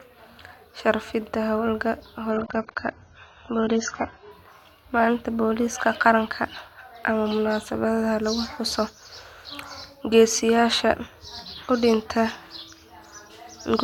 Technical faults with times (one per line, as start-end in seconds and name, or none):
2.31-4.31 adaptive stream at a lower bitrate